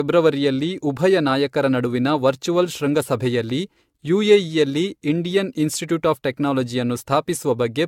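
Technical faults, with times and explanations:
Throughout: generation loss. The speech has most likely been through a lossy codec many times over, around seven rounds of decoding and re-encoding, with a character that fits AAC-LC at roughly 96 kbit/s. Each pass quantised the signal again on a shifted frame grid, so errors and spectral gaps piled up. The result sounds swirly, smeared and hollow beyond what that bitrate alone would give, consonant attacks are blurred, and nothing is left above 17 kHz.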